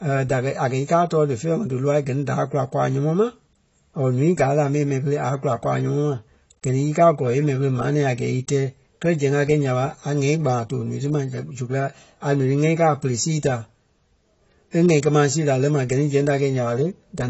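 From start to finish the speech has plainly audible AAC compression damage, likely from low-bitrate AAC-LC, perhaps around 24 kbps. Nothing is present above 8 kHz, so sibilants sound dull, and the coarse quantisation leaves a smeared, warbling, fizzy texture.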